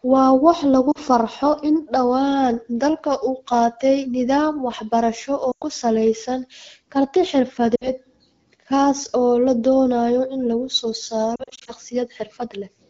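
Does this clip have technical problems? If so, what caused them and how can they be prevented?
Yes. The speech briefly dips and warbles at 0.91 s (40 ms), 7.75 s (60 ms) and 5.51 s, where a 100 ms gap drops to near silence. From 11.35 to 11.72 s, several short gaps of up to 40 ms each are scattered across 320 ms. These are lost AMR speech frames. Radio errors corrupted the frames, and the decoder filled each gap by reusing the last good pitch and vocal tract settings at falling gain. A stronger radio link with more robust channel coding prevents this.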